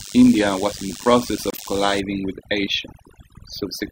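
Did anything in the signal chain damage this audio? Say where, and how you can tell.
Yes. Throughout, overdone noise removal in call processing leaves a near-silent background with twinkling specks. On a spectrogram the gaps look empty, with scattered isolated dots.

From 0.0 to 2.0 s, DECT cordless phone buzz enters through the analogue wiring. Radio bursts every 10 ms are rectified into a thin 100 Hz buzz about 15 dB below the signal. A spectrogram shows a comb of harmonics spaced every 100 Hz.

In the codec, each corrupt frame decoded causes a brief burst. At 1.50 to 1.60 s a fairly loud error spans a few frames, and at 2.84 to 2.90 s a faint one spans a couple. Each appears as a short block of energy at the wrong frequencies.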